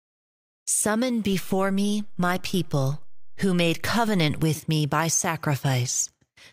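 At 1.33 s, just before "with me by", the speech has a DC step: the waveform's zero line jumps by about -32 dBFS, the kind of shift produced when a converter recalibrates or an offset-carrying input is switched into the path. The offset lasts until 4.43 s. Each step is heard as a brief low thump or click, while the speech itself continues unchanged.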